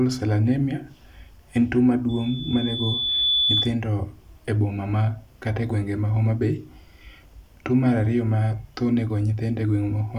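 A microphone picking up its own loudspeaker closes a loop whose gain passes unity at one frequency, and the result is loudspeaker feedback squeal in this speech clip. Right after "en tuo", at 2.09 s, a pure tone near 3.5 kHz starts to ring and swells over about a second until it sits roughly 5 dB above the speech. It holds as a piercing whistle and stops at 3.75 s.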